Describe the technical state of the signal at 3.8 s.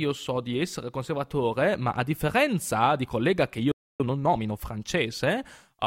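At 3.8 s the speech is in a playback stall. The output goes silent from 3.72 to 4.00 s, about 0.28 s, just after "differenza di collega che". The player likely ran out of data or was blocked. Then the speech resumes.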